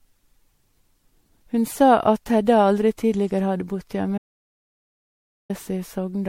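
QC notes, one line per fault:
Throughout: generation loss. The sound is swirly and hollow, with smeared consonant attacks and a watery shimmer, and nothing comes through above 16.5 kHz. That's more damage than a single lossy pass would leave. It's likely from the audio being decoded and re-encoded as MP3 several times over, roughly five generations at what sounds like a 64 kbit/s rate. Each pass lands on a slightly different frame grid, so the quantisation noise and spectral holes pile up.
4.18–5.50 s: audio dropout to silence. Right after "tidligere hadde bodd" the speech cuts out mid-flow and comes back about 1.3 s later. The gap is dead digital silence with no room tone at all. That points to the input dropping out, probably a disconnect or link failure, while the recorder kept writing silence. Whatever was said in that stretch is simply gone.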